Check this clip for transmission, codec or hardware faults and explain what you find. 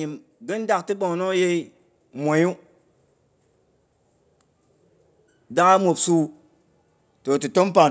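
One fault turns up here: automatic gain rising. From 0.05 to 2.58 s the gain control decides the input's too quiet and ramps it up about 5 dB, so voice and background swell together. The call's microphone processing caps everything at 8 kHz, as expected.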